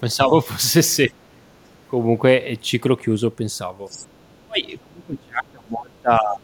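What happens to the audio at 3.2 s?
Nothing goes wrong at 3.2 s: the speech carries on cleanly through that moment, with no dropout, click or distortion.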